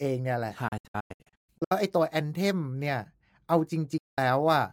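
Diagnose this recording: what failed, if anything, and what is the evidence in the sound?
Digital broadcast dropout at the reception and decoding stage: the speech mutes in scattered holes from 0.68 to 1.72 s, none longer than about 128 ms, then for 192 ms within 3.98 to 4.18 s. Quick 8 ms fades into silence mean failed frames were muted, not concealed or smeared as packet-loss concealment would.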